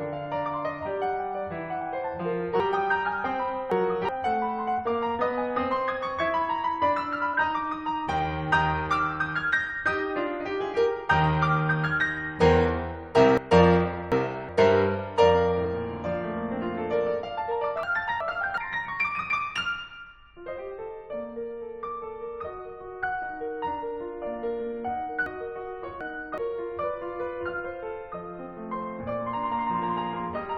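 The music gets shuffled from 2.60 to 4.09 s: chunks out of order, with one 372 ms chunk landing three chunks late, so nothing's missing but the sequence jumbles at the hard joins. A short glitch at 4.77–4.79 s is damaged data in a compressed stream, where the decoder misreads corrupted frames and searches for the next frame header to resync. It recurs at 7.33 s. More reordering follows at 13.38–14.49 s (two chunks late), another blip at 15.64 s, and reordering at 17.83–18.58 s (one chunk late). Corrupted-data glitches come at 20.57 and 23.02 s, and the last shuffle runs 25.26–26.38 s, two chunks late.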